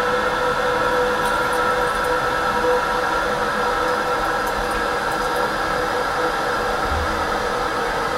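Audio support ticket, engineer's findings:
No faults found in the audio on review. Nothing heard points to a failing component or processing stage, so there are no findings to log.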